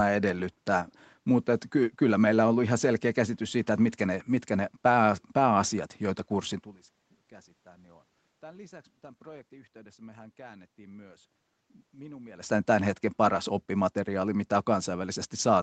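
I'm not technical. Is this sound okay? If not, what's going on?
Yes, nothing stood out as a problem on listening, and the voice getting quieter or louder around 6.5 and 12.5 seconds is simply the talker moving relative to the microphone.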